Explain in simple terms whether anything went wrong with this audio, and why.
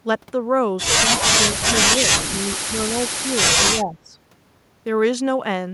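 Speech suppressed in double talk at 1.04 to 1.39, 1.97 to 2.03, 2.28 to 2.34, 2.55 to 2.92, 3.3 to 3.4 and 3.71 to 4.15 seconds: the talker briefly dips or nearly vanishes, likely because an echo canceller mistook their speech for echo while both sides talked.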